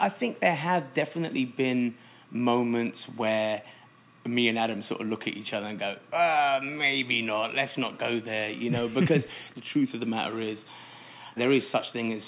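No technical faults can be heard anywhere in this audio.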